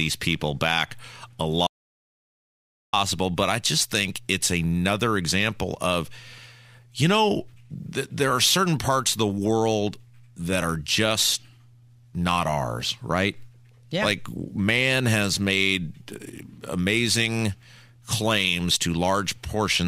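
At 1.67 s the speech cuts out to silence, no room tone, until 2.93 s: an audio dropout to silence, likely a lost input link.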